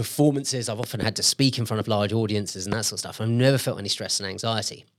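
Loud pops occur as a pair between 0.84 and 1.05 s, then singly at 1.81 to 1.83 s and 2.72 to 2.75 s, peaking roughly 10 to 15 dB above the speech. They are likely voltage spikes from a plug, switch or static. Unlike dropout clicks, the speech continues unbroken beneath each thump.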